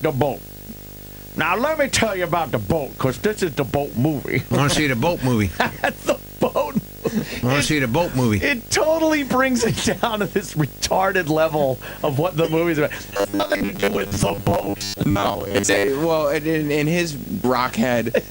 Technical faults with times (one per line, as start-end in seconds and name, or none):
0.00-18.30 video or display buzz
13.10-15.91 robotic sound from repeated short buffers
17.44 damaged data in a compressed stream